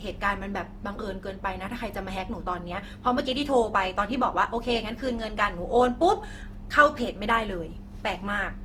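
Repeated lossy coding has likely degraded this speech recording: it sounds decoded and re-encoded around five times, which fits a chain of Opus passes at about 48 kbit/s. Each generation requantises on a shifted frame grid, so coding noise piles up across the whole clip. The result is generation loss, a swirly, hollow, smeared quality beyond what that bitrate would give once, with softened consonant attacks, though content still extends to about 20.2 kHz.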